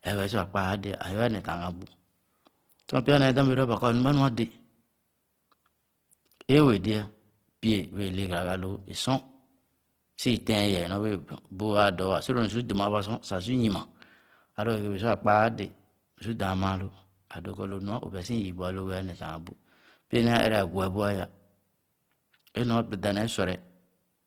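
Speech runs grainy, rough and plainly noisy for the whole clip while keeping full bandwidth up to about 20 kHz, likely from Opus compression in its music mode, which fits a low bitrate around 16 kbps.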